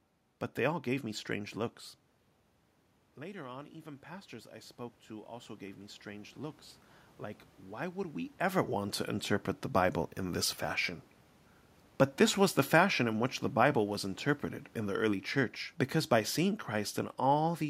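Automatic gain rising from 3.17 to 6.66 s in this speech recording: after the talker moves back around 2 s and the input falls by about 13 dB, the gain control slowly adds about 7 dB, so voice and room noise swell together.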